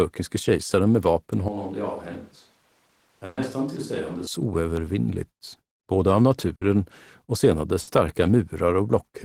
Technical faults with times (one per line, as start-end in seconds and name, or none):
1.48-4.27 switch to a distant microphone
3.25-3.40 burst of packet loss
4.77-4.79 loud pop
6.55-6.64 burst of packet loss
7.81-7.90 burst of packet loss